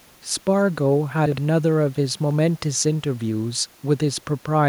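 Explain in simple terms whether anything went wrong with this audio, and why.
Something went wrong in how the audio was put back together. Between 1.26 and 1.38 s there are chunks out of order: the audio travels in small pieces of about 60 ms, and one piece arrived a step late and was played after the piece meant to follow it. Nothing is missing, but that brief stretch of speech sounds jumbled. The faint background noise is ordinary room noise, not a fault.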